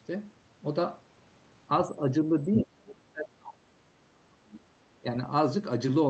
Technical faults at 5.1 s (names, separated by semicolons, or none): speech suppressed in double talk